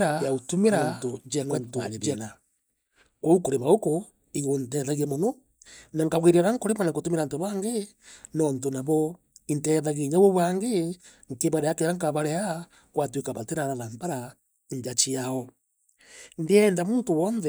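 A doubled audio track runs from the start to 2.22 s: an equally loud copy trails about 0.7 s behind, likely from a slower second capture path, and stops abruptly.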